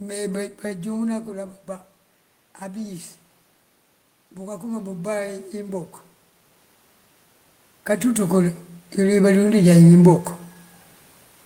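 Speech with automatic gain rising twice: from 4.59 to 5.94 s the level climbs about 3 dB, and from 8.0 to 10.29 s about 5 dB. Voice and room noise swell together as the gain control boosts input it judged too quiet.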